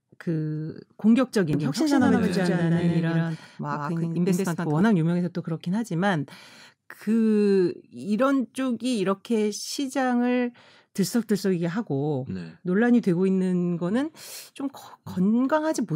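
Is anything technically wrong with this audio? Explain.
Yes. From 1.53 s to 4.81 s the speech carries a doubled audio track: a second, full-band copy of the same audio runs roughly a tenth of a second behind, at about the same level as the original. This is likely a second capture path or an edit holding two copies out of step. The result sounds like a hard, dry echo with no room decay, and it switches on and off abruptly at those boundaries.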